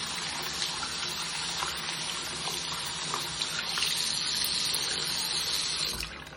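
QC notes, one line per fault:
No faults were found in this clip. Nothing in the audio called for a note.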